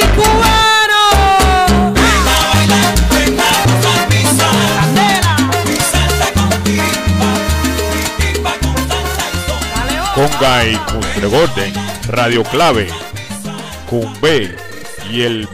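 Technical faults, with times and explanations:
Throughout, hard clipping: the signal is driven about 12 dB past what the stage can pass, so roughly a tenth of the samples are sliced flat at the ceiling. Those squared-off peaks add strong high harmonics, giving a harsh fuzz on every loud passage.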